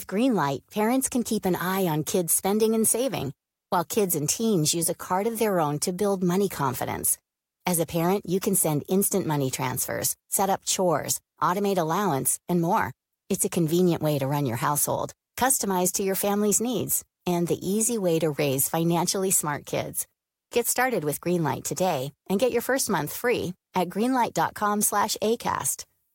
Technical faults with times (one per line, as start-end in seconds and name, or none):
none